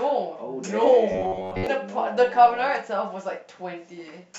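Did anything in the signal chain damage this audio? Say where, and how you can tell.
Yes. From 1.12 to 1.67 s the speech becomes a rigid, metallic buzz near 94 Hz that only loosely follows the syllables. This is robotic sound from repeated short buffers, likely a driver underrun. A 10.7 ms slice repeats for most of the span, setting the buzz rate.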